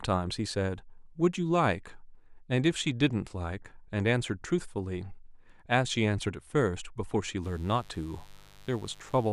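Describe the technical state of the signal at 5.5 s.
At 5.5 s the speech signal is intact, with no dropout, clipping, distortion or other fault.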